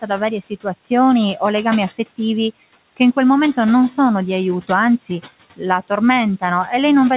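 Noise suppressor artifacts run through the whole clip. The suppressor judges which frequency bands hold steady noise and turns them down frame by frame, here by about 15 dB. The room noise, sitting about 19 dB below the speech, therefore drops away in the pauses and comes back up beneath the speech whenever it resumes. The call path can be heard in the band limit, with nothing above 4 kHz, which fits a G.711 mu-law codec at 64 kbps.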